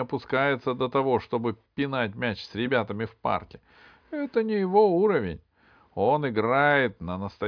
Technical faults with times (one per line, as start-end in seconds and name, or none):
none